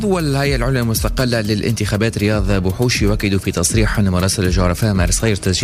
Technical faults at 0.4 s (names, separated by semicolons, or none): none